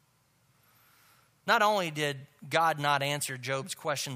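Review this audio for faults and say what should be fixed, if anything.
Nothing to fix: no faults turned up anywhere in the speech recording, so no repair or preventive change is called for.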